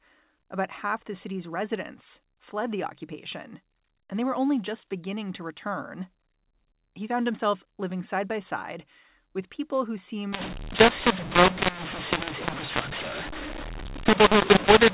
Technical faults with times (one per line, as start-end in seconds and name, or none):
10.33-14.94 mu-law and A-law mixed up